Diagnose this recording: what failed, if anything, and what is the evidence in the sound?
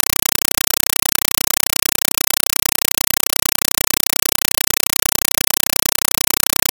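The fault sits at playback, on the digital link: a Dolby Digital (AC-3) stream was passed through as if it were ordinary PCM samples and never decoded, so the result is a compressed stream played as audio. For the whole clip the speech is replaced by very loud, chattering static. Each frame's data lands as a 5.3 ms burst of noise followed by silent padding, repeating 31.25 times a second. The burst length fits a roughly 256 kbps stream.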